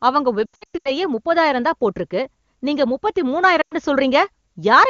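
From 0.46 to 0.91 s, ending just before "முப்பதாயிரம் தான் போட்டிருக்கு நீங்க", the speech warbles and dips repeatedly, and it smears and fades briefly again at 3.61 to 3.75 s. These are lost AMR speech frames: the decoder stretches the last good parameters at falling gain to cover the gaps.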